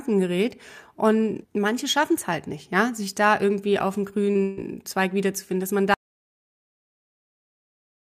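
Just after "da irgendwie auf dem", a brief smeared wobble at 4.31 s and a shorter one at 4.37 s are short concealed packet losses. About 40 ms, then 20 ms, of audio never arrived, and the receiver filled the holes by extending the preceding sound before blending back.

From 4.43 to 4.59 s a held, fading continuation replaces the real audio. This is a burst of packet loss: about 140 ms went missing in a row, and the decoder stretched and faded the last sound across almost the whole gap, leaving no silence, before the speech resumes further on.

At 5.94 s the speech cuts out to complete silence, with no room tone, and stays silent to the end. This audio dropout to silence likely comes from the input being lost, such as a disconnected device or an accidental mute, while silence kept being written.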